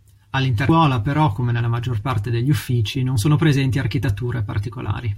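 Damaged data in the compressed stream at about 0.68 s: corrupted bytes make the decoder misread a frame, lose sync and hunt for the next valid header. In this speech the result is a brief glitch lasting about 14 ms, likely with a skip forward.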